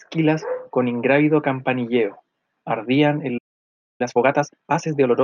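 The speech cuts out abruptly at 3.37 s and stays silent until 4.01 s, a gap of about 0.62 s. This is a playback stall, likely from the player running out of buffered data or its thread being blocked. From 4.01 to 5.13 s the speech comes out hurried, at about 1.5 times normal speed but at its normal pitch. This is time-compressed catch-up: the player trims its backlog by dropping short slices and cross-fading the joins.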